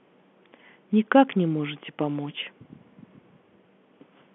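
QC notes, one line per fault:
No faults; telephone-band speech, nothing above 3.6 kHz.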